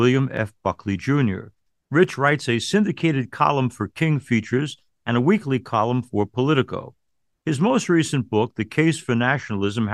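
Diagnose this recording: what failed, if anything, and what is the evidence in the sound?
A click recurs every 1.67 s, from 0.37 s to 8.72 s, about seven in all. The regular spacing points to the buffer stage, likely clock drift buffer slips: independent clocks roughly 200 ppm apart force around fifteen samples to be dropped or repeated each time.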